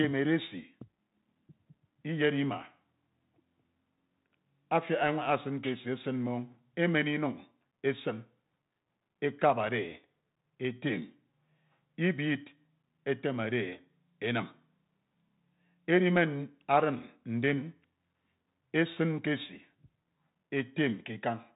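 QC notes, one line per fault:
Throughout, Bluetooth CVSD headset codec: the speech is band-limited with nothing above 3.8 kHz, and the damage is plainly audible. Each sample is coded as a single up-or-down bit with an adapting step, which fits 64 kbps CVSD. Loud, fast-rising high sounds outrun the step and distort, s sounds turn scratchy, and granular hiss sits under the speech. A spectrogram shows a hard ceiling at 3.8 kHz with a grainy noise floor; the waveform shows slope-limited, jagged peaks.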